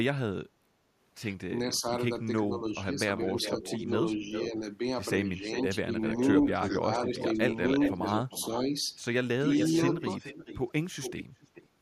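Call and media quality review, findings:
Speech suppressed in double talk, 1.66–1.84 s, 2.48–4.58 s, 5.69–5.91 s, 6.81–7.41 s, 7.94–8.71 s. Level dips of about 5 dB at 1.66 s and 6.81 s. About 10 dB in the others. Each dip lasts only a fraction of each span. Likely the echo canceller during overlapping talk. It cannot tell near talker from loudspeaker echo. It attenuates both.

Echo leak, 3.17–4.49 s, 5.42–8.6 s, 9.41–11.68 s. Delayed copy of the speech, about 10 dB under the direct signal. Delay 0.4 s in the first two spans, 0.43 s in the last. Likely the far-end echo canceller on a loudspeaker device. Residual microphone pickup is returned down the line.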